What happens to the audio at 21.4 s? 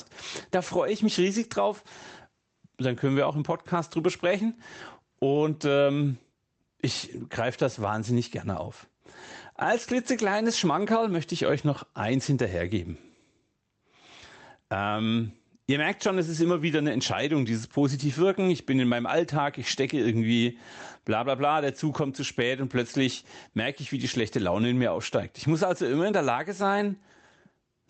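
At 21.4 s, as across the whole clip, the gain swings by around 10 dB, pulled down whenever the speech gets loud, leaving a squashed, breathing level. This is gain pumping, likely from excessive microphone gain driving a fast limiter or compressor.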